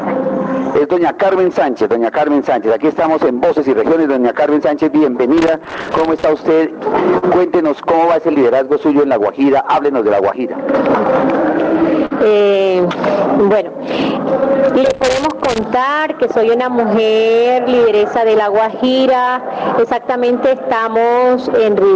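From 5.38 to 6.24 s, and again from 14.86 to 15.64 s, loose connector crackle breaks in: a worn contact making and breaking chops the signal into irregular scratchy bursts. At 7.18 to 7.24 s a short stall from a late packet occurs; the jitter buffer ran dry, so the last sound is held for 44 ms before continuing from the same point, with nothing skipped. At 12.06 to 12.12 s a burst of packet loss follows. The receiver bridges 47 ms by extending and fading the preceding sound, then resumes with 40 ms of audio gone. From 19.85 to 20.25 s, a jitter buffer speed-up trims small pitch-period slices, about 50 ms in all, to reduce delay, so the sound runs at 111% speed without changing pitch and feels rushed. Throughout, the call path limits the audio to below 8 kHz, which fits G.722 at 64 kbps.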